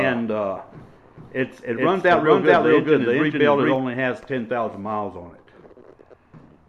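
A doubled audio track runs from the start to 3.76 s: an equally loud, dry copy trails about 0.4 s behind, likely from a slower second capture, and cuts off abruptly.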